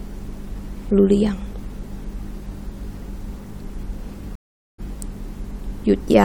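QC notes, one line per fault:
4.35–4.80 s, stream reconnect: the speech cuts to silence for 0.43 s, then comes back roughly a fifth of a second further along, so a bit is skipped. The connection dropped, the player reconnected and started a fresh decoder mid-stream, which fades back in.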